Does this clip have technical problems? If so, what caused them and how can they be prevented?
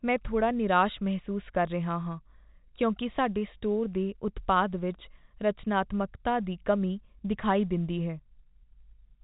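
No, this clip has no technical problems.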